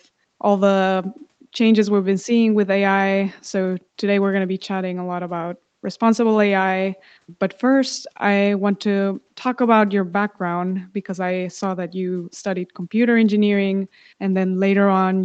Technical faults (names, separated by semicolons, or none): none